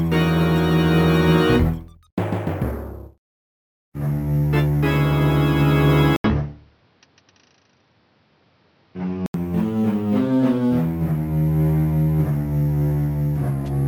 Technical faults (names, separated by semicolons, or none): input switched to a poorer device